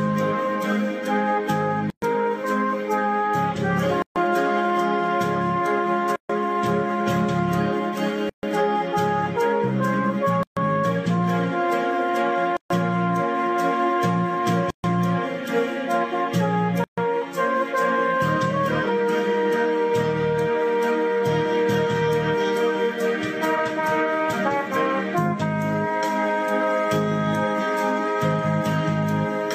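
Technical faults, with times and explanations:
1.90, 4.02, 6.16, 8.29, 10.43, 12.57, 14.70 and 16.84 s: gap at a join of encoded pieces. Silence cuts in for 120 ms first, then 136 ms. Edges are smeared. Each 2 s piece kept its encoder delay and end padding.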